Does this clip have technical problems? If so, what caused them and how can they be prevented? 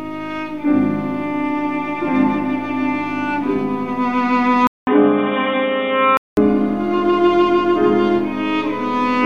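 Yes. From 4.67 to 6.37 s the sound goes dull, with nothing above 3.8 kHz. A 200 ms gap opens the change. Level shifts by around 5 dB, over a new, low noise floor. The likely cause is the input switched to a poorer, narrower-band device. Lock the input device before recording.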